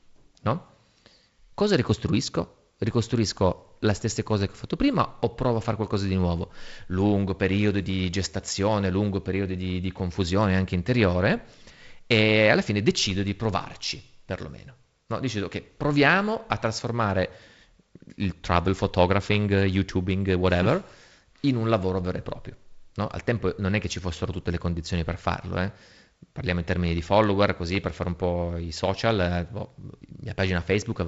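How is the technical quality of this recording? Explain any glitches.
No glitches turn up anywhere in this speech recording, which sounds like it came over a wideband telephone link, most likely G.722 coding, with the top end stopping around 7.7 kHz and a faint, light grain to it that fits the 48 kbit/s mode.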